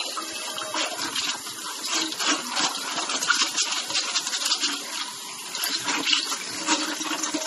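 Throughout the recording, the audio has no content above 12.4 kHz and a watery, swirling texture, with metallic chirps on bright sounds and smeared attacks. This is likely MP3 compression at a starved bitrate, roughly 32 kbps, where weak frequency lines drop in and out between frames.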